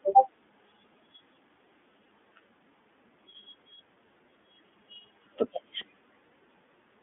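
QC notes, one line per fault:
throughout: iLBC codec, narrowband coding in 20 ms frames leaves nothing above 3.8 kHz, so the speech sounds plainly rough and synthetic rather than merely muffled.
0.59 s: underrun with held sample, the waveform freezes flat for about 5 ms as roughly 5 ms of audio is skipped.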